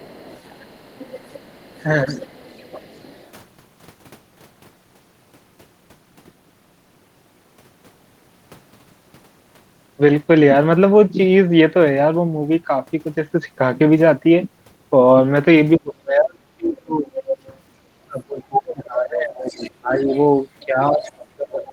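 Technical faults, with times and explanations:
0.00–3.31, 17.16–17.37, 18.55–18.82 and 19.46–21.14 s: other side's voice leaking through. A second, separate voice sits under the speech: faint at the start (about 25 dB down) and near the end (about 20 dB down), but much closer to the talker's level in the short bursts at 17.2 s and 18.6–18.8 s. This is likely an echo canceller letting the far end's loudspeaker sound back into the microphone. Unlike suppression, this adds sound rather than removing it.
2.04–2.31, 15.78–17.09, 18.05–20.11 and 20.66 s to the end: speech suppressed in double talk. The talker's own voice sinks sharply in places. The drop is smaller, about 15 dB, in the brief dip near 2.1 s, deepest at around 30 dB across 15.8–17.1 s, and around 25 dB in the later two stretches, with about two seconds affected within 18.05–20.11 s. The likely cause is an echo canceller turning everything down when both sides spoke at once. 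The result is missing speech rather than an extra voice.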